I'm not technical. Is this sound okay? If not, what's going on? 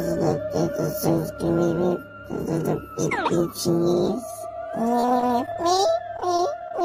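No. From about 5.00 to 6.81 s there is repeated packet loss (robotic sound): many short dropouts, none longer than about 21 ms, each patched by stretching the sound just before it. That patching gives a choppy sound with pieces missing.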